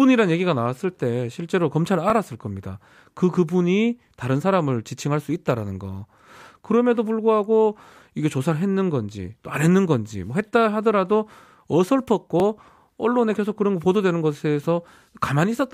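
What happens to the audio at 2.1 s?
At 2.1 s there is a repeated buffer, from 2.1 to 2.12 s. New audio arrived late, so the device replayed its last 20 ms block once. A hard join marks the repeat. It sounds like a short stutter, click or brief buzz, and essentially nothing is lost.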